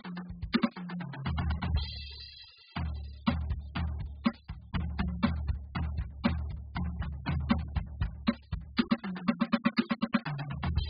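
From start to finish the music sounds dull and warbly, with nothing above 5 kHz. That's likely heavy AAC compression at a starved bitrate, roughly 8 kbps.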